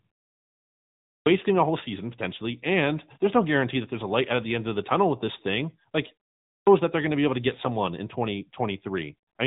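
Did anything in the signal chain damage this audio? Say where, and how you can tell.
Yes: codec stage, AMR narrowband mobile codec throughout, with nothing above 3.8 kHz and a plainly buzzy, synthetic vocal-tract sound consistent with roughly 10.2 kbps, unlike plain low-pass filtering, which stays natural.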